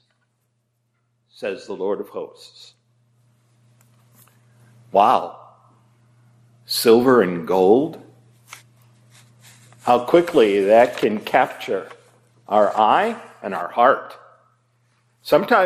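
MP2 compression runs throughout the audio: it sounds dull, with a gurgling, granular texture as upper sub-bands drop in and out and the remaining bands are coarsely quantised. This is likely starved Layer II encoding, and the damage points to roughly 80 kbps. DAB burbling appears from 7.02 to 7.15 s as a short burst of burbling. Bit errors slipping past error correction corrupt samples, putting short blips of noise in single sub-bands, which fits about five damaged frames at a low error rate.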